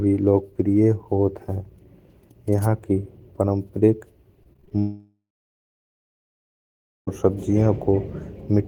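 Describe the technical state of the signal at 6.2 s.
At 6.2 s the speech sits inside a long network dropout from 4.79 to 7.09 s, likely a break in delivery. The receiver stretched the last sound into a fading buzz or hiss, then left about 1.87 s of silence. The waveform shows a flat line, and the spectrogram shows a blank band after a smeared, decaying tail.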